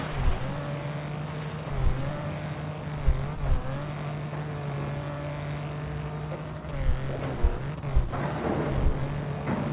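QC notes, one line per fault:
No faults detected.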